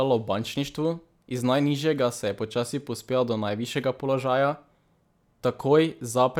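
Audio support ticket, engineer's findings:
No faults found in this speech clip; nothing to report for the ticket.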